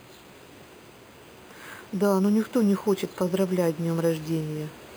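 Speech throughout carries imaging from sample-and-hold upsampling: each sample was repeated unfiltered, pointing to an 11 kHz source raised to 44.1 kHz. Mirror copies sit about 23 dB down, the lowest spanning 5.5 to 11 kHz. Unlike steady hiss, this metallic fizz follows the speech's loudness.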